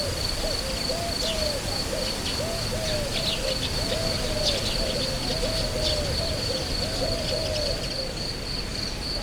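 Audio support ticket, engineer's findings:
Doubled audio track, 3.73 s to 7.87 s. A second full-band copy of the sound trails the original by about 1.5 s, roughly 5 dB quieter. Dry, no decay or room colour. Cuts in and out abruptly at both ends. Likely cause: a second, slower capture path mixed into the output, or an edit leaving two copies out of step.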